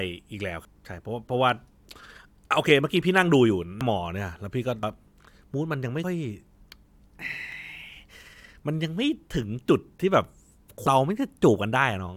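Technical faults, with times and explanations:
0.65, 2.51, 3.81, 4.83, 6.04, 7.52 and 10.87 s: dropped buffers, likely from overruns. Each is a jump forward, losing roughly 0.1 to 0.3 s of speech.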